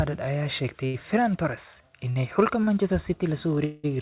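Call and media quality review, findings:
Call and media quality review, findings:

Short stall from a late packet, 0.86–0.96 s. Sound held about 76 ms, slight buzz or dip. Jitter buffer ran dry waiting on a late packet. Receiver stretched last audio, then resumed in place. Nothing lost, playout delay grew by the same amount.

Same fault at 2.10–2.18 s, about 56 ms held. Again at 2.64–2.69 s, about 33 ms. Same mechanism each time. Nothing dropped. Delay ratchets up per stall.

Call audio freeze, 3.65–3.86 s. About 186 ms of continued sound, a buzz or hiss fading out but never reaching silence. Audio then picks up where it stopped, with a gap inserted and nothing missing. Cause likely packets held in transit, emptying the jitter buffer.

Band-limited to 4 kHz throughout, which fits a 64 kbps G.711 A-law narrowband path.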